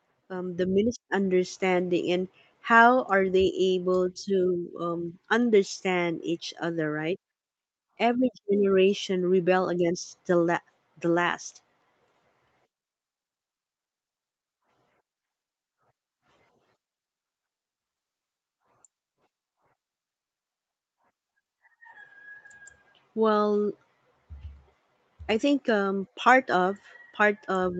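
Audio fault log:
0.28–2.14 s, automatic gain rising: speech and background swell together by about 5 dB over nearly two seconds, as the gain control lifts a too-quiet input.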